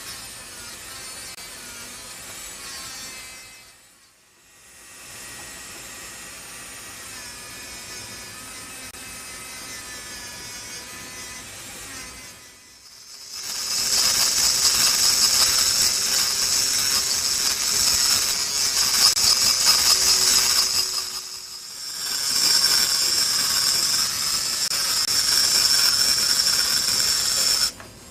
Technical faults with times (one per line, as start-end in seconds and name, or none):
13.33 compressed frames skipped